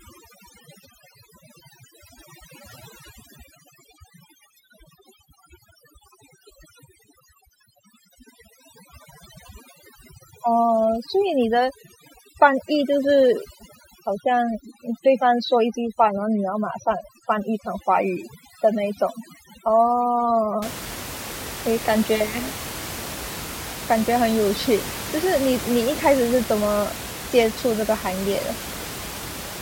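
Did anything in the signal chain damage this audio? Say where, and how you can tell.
Yes, overdone noise removal in call processing from 0 to 20.62 s. Bands near the noise estimate get cut, leaving twinkly near-silence and taking quiet parts of the speech with them.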